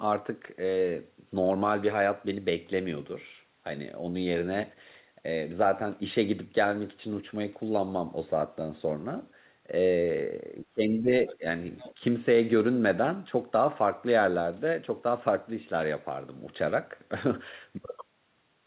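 From 10.68 to 11.10 s the speech sags by roughly 25 dB in patches: speech suppressed in double talk, likely an echo canceller ducking the near talker while both sides spoke. The waveform shows hollowed-out envelope stretches. At 11.29 to 11.35 s a faint second voice, about 20 dB below the speech, leaks through. This is the other side's voice leaking through, likely as residual loudspeaker echo, a low-energy smear on the spectrogram. A shallower dip of about 10 dB follows at 11.38 to 11.43 s. A longer echo scrap comes at 11.78 to 11.94 s. Nothing reaches above 4 kHz, consistent with a G.711 call path.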